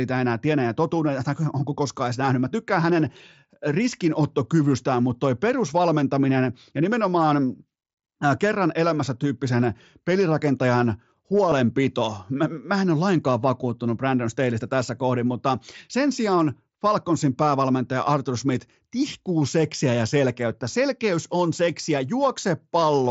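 A faint, brief buzzy smear at 11.5 s, just after "kerran elämässä tyyppisen pelirakentajan", and a shorter one at 20.72 s, between "tihkuu seksiä ja selkeyttä" and "on seksiä", is concealed Bluetooth headset packet loss. About 15 ms went missing in the first, consistent with two lost frames, and 7.5 ms in the second, one frame. The receiver papered over each gap by repeating the closest-matching recent stretch of the wideband mSBC speech.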